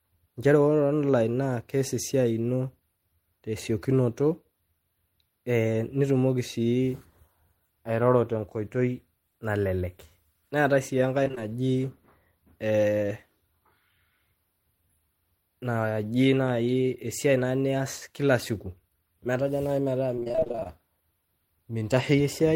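At 11.23 s, just after "neatae sii", repeated packet loss (robotic sound) chops the speech for about 0.15 s, and it returns more heavily from 20.16 to 20.70 s. Short dropouts, none longer than about 25 ms, are each patched by extending the preceding sound, so nearly half of each stretch is filler. The result is choppy, with pieces missing. A spectrogram shows smeared, repeated frames with abrupt seams, and the waveform shows looped, stuttering cycles.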